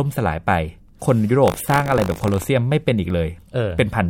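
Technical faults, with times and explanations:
1.44 to 2.49 s, buffer tearing: the speech takes on a rattling, robotic buzz at 50 Hz that lasts about a second. The software filling the playback ring buffer and the hardware draining it have drifted into each other, so inside every period a small slice of each buffer still holds audio roughly 40 ms old, butted against current material with hard joins on both sides. Those joins repeat every 20 ms, which points to a buffer of about that length.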